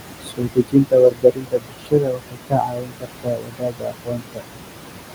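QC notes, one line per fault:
Throughout: noise suppressor artifacts. The room noise, which sits about 10 dB below the speech, is pulled down by about 21 dB in the gaps and swells back up under the talking, so the background pumps in step with the speech. This happens because the suppressor judges each frequency band separately from frame to frame. That moving residue marks suppression at work, where steady room noise left alone would simply hold constant.
0.21 to 4.43 s: speech cut by the noise suppressor. Across this stretch the suppressor mistakes parts of the speech itself for noise and turns them down along with the background, by as much as about 22 dB at the deepest point. In all, roughly three seconds of speech are affected. Soft consonants and word endings come out swallowed or faint. This is different from the artifacts above, where the background misbehaves: here the speech itself loses pieces.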